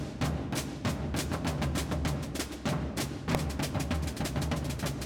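At 3.35 s there is one sharp bang. This is invalid numbers at full scale: a calculation produced invalid values, pinning the output to one extreme value for about 0.67 ms.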